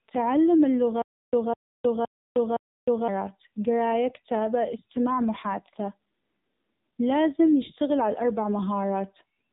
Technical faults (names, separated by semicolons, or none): AMR narrowband mobile codec; stutter with silent gaps